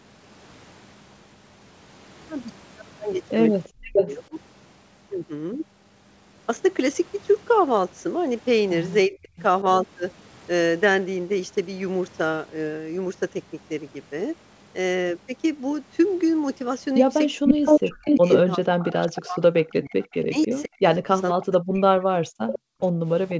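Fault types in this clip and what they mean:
Echo leak: A delayed copy of the speech comes back 0.39 to 0.49 s late, near full level around 17.45 s. This is likely far-end loudspeaker echo the canceller missed.
Speech suppressed in double talk: The speech dips by up to about 40 dB in pieces, longest from 17.4 to 22.23 s. The likely cause is the canceller turning down both its own talker and the loudspeaker echo.
Background gated by the echo canceller: The room sound drops by about 40 dB from 22.59 s to the end. The canceller clamped the microphone while the loudspeaker played.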